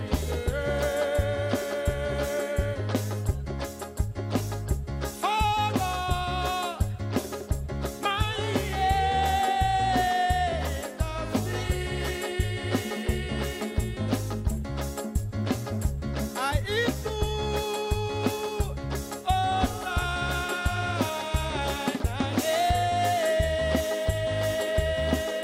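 Nothing in the audio calls for attention: no faults turn up anywhere in it.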